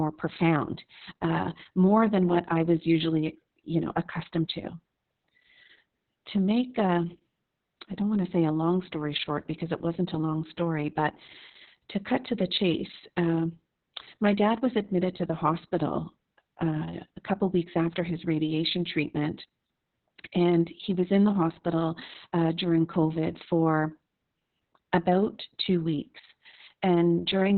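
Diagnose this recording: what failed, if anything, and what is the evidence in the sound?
Codec stage: Opus voice compression in narrowband SILK mode, fitting a bitrate near 6 kbps, removes everything above 4.3 kHz throughout and leaves the speech muffled, hoarse and robotic.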